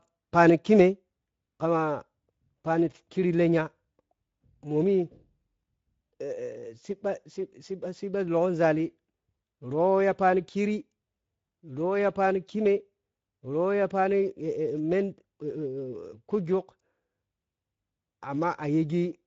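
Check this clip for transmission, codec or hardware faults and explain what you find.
One codec fault runs through the whole clip. Speex codec damage is present from start to finish. Speex is a CELP coder: it models the speech with a predictive filter and spends a limited bit budget on the excitation signal that drives it. Here that budget is clearly tight, at around 17 kbps. The speech comes through audibly coarse and grainy, and nothing is left above 7.7 kHz.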